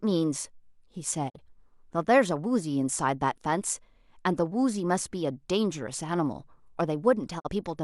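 At 1.28 s the speech fades out over about 20 ms and drops to silence, returning at 1.39 s. The same digital broadcast dropout recurs from 7.38 to 7.49 s. In each case the receiver failed to decode the incoming stream and muted until valid frames resumed. Roughly 43 ms of programme is missing each time, consistent with one lost frame. The result is a brief, clean hole in the speech, and the audio sent during the gap is not recovered.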